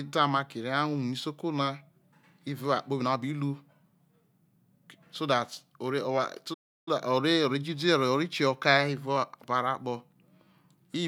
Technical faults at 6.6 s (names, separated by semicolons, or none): playback stall